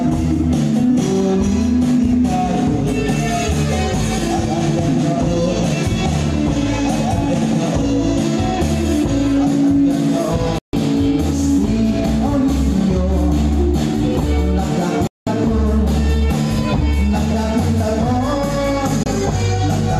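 The audio shows a digital broadcast dropout three times, muting from 10.58 to 10.74 s, 15.07 to 15.27 s and 19.03 to 19.06 s. Each hole fades in about 3 ms, and the gap lengths fit whole 24 ms frames. Unlike concealed packet loss, nothing fills the gaps.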